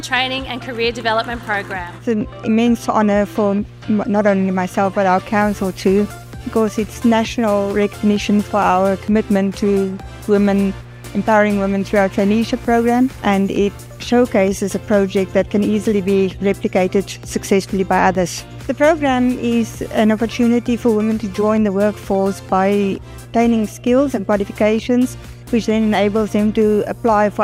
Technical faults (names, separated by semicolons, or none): mains hum